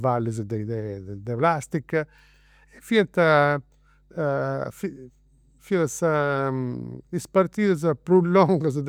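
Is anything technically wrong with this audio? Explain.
Yes. Mains hum at 50 Hz runs under the speech for the whole clip, well below it in level. A ground loop or nearby transformer lets the power line leak into the signal. Unlike broadband rumble, it is a steady pitched drone that never wavers.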